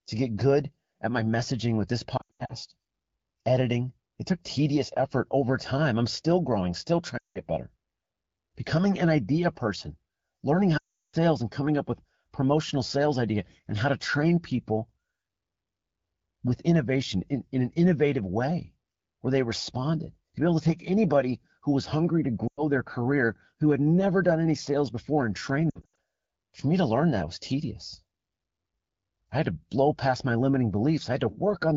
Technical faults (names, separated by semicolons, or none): lost AMR speech frames